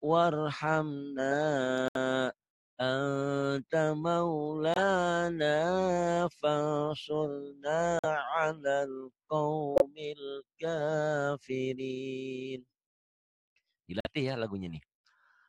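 The audio drops out abruptly five times, at 1.88 to 1.96 s, 4.74 to 4.79 s, 7.99 to 8.05 s, 9.76 to 9.82 s and 14.00 to 14.07 s. Each gap lasts roughly 50 to 80 ms and is pure silence. These are corrupt frames that were muted. Flipped bits damaged a few compressed frames. The decoder rejected them, and the player inserted silence instead. The surrounding sound stays in time, so nothing is skipped or shifted.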